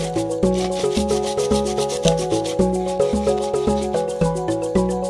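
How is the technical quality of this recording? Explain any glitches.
Nothing here trips me up, as there are no glitches, dropouts or other technical faults to point to anywhere in the recording.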